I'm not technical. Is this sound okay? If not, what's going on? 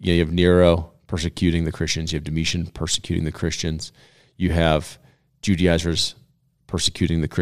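Yes, this sound is okay, and nothing is going wrong with it.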